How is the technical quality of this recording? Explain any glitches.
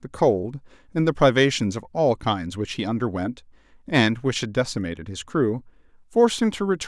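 No glitches turn up anywhere in the recording. Nothing in the speech calls for a technical explanation.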